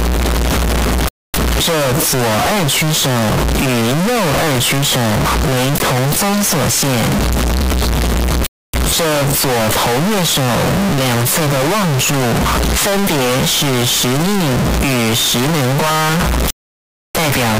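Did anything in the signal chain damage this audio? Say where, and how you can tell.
Yes, at sample-format conversion: throughout, the audio is a harsh, near-square wall at an almost fixed, high level with noise as loud as everything else, likely float read as integer.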